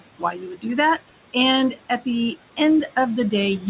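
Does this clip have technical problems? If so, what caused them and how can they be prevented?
Yes. Noise suppressor artifacts run throughout. The suppressor pulls the steady background down by about 18 dB between phrases, letting it rise again under the speech, so the remaining noise pumps. A milder suppression setting, or reducing the room noise at its source, would prevent this.

Speech cut by the noise suppressor occurs from 0.19 to 0.65 s. The suppressor mistook soft parts of the speech for noise and turned them down by up to about 16 dB, roughly a fifth of a second in total, so they sound swallowed. Placing the microphone closer, so the speech stands further above the noise, and using less aggressive suppression would prevent it.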